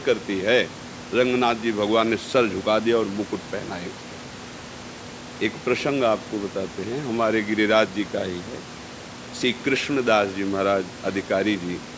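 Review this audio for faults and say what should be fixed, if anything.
No faults; nothing needs fixing.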